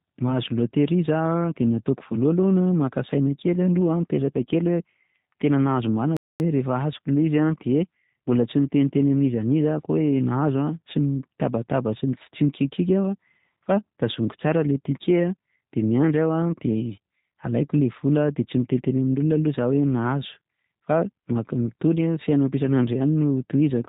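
From the very start the speech carries the G.729 codec's signature: everything is cut off above about 4 kHz, and the voice comes across slightly rough and synthetic, since it's being rebuilt from a vocal tract filter and sparse pulses. The damage is plainly audible and fits an 8 kbit/s G.729A stream.

Then at 6.17 s there's a playback stall. The sound just stops mid-flow and stays silent for about 0.23 s before picking up again at 6.40 s. That's most likely the player running dry of data or its thread getting blocked.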